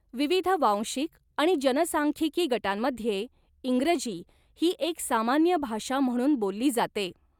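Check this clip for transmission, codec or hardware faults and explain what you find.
Two related faults run through this speech clip, both tied to the sender's clock.

Clock drift between sender and receiver is present for the whole clip, with the sender's clock running roughly 4 percent fast. Because samples arrive slightly faster than the receiver plays them out, the jitter buffer keeps gaining surplus audio that must be shed to hold latency steady. Heard alone, the drift has no sound of its own; its effect shows up entirely through the corrections it forces.

Repeated timing corrections occur from 0.08 s to 7.40 s, effectively the full length. To keep pace with a sender running at 104 percent, the receiver repeatedly trims short slices of audio, always in the same direction, at uneven spacing. Each cut is small, so if they are heard at all, it is as slight hiccups or an unsteady tempo rather than obvious gaps or clicks.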